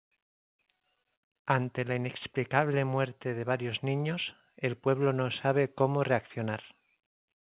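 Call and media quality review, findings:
No findings for this call and media quality review; the speech carries the narrowband character of a G.711 mu-law call path at 64 kbps, with nothing above 4 kHz.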